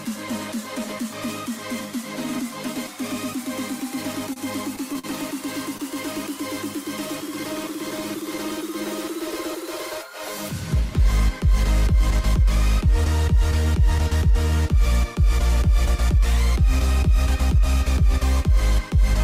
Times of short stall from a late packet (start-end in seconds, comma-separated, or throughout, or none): 4.33-4.38, 4.93-5.06, 5.78-5.81